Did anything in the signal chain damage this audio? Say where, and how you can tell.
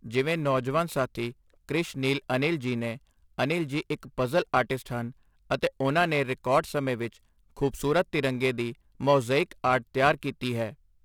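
Yes. The damage is at the converter: periodic clock jitter runs through the whole clip, with the sampling clock wobbling at around 1.5 kHz. That timing wobble phase-modulates everything converted, so each component of the speech gains sidebands roughly 1.5 kHz above and below it, stronger on higher-frequency content. It sounds like a rough, metallic edge on the speech that disappears in pauses. On a spectrogram, ghost copies of the harmonics sit at that fixed offset. The waveform shows almost nothing.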